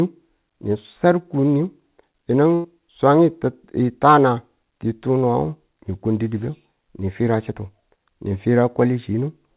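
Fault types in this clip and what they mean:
Burst of packet loss: At 2.54 s, about 100 ms of speech never arrives in time. The receiver bridges the hole by prolonging the last sound and letting it fade until 2.66 s, so there is no silence, just a smeared, decaying tail. Speech then resumes with that stretch missing. Unlike a dropout, nothing goes silent, and unlike a single lost packet, the concealment is long enough to hear over the 4 kHz-limited G.711 call sound.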